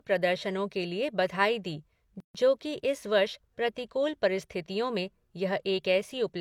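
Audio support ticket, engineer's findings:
Gap at a join of encoded pieces, 2.20–2.35 s: 144.5 ms gap before "जो कि", smeared edges. Separately encoded segments joined untrimmed; encoder delay and last-frame padding kept. Unlike a dropout, speech resumes where it stopped.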